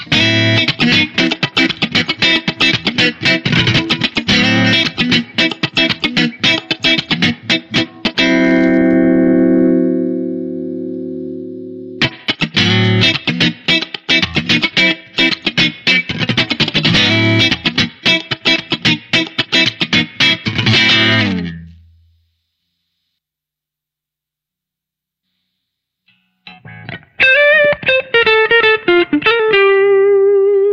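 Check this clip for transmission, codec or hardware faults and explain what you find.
No fault can be heard anywhere in the clip. Nothing in the audio suggests a problem in how it was carried, encoded or reproduced.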